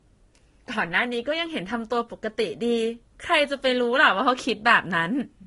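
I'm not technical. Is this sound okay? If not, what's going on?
No. Throughout the clip the speech has a dull quality, with nothing above about 11.1 kHz and two different kinds of compression artefacts layered together. This is likely transcoding between lossy codecs: the audio was compressed once, then compressed again by another codec that added its own damage.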